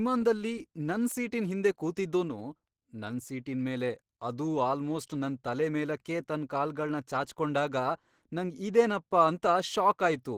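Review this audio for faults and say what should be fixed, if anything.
Throughout the speech, the sound is hoarse, grainy and somewhat muffled, with plainly audible codec damage even though content extends up to 20.4 kHz. The cause is likely Opus compression running in its hybrid speech mode and short of bits, which fits a rate near 16 kbps. To prevent it, encode at a higher Opus bitrate so the encoder keeps enough bits for clean, full-band speech.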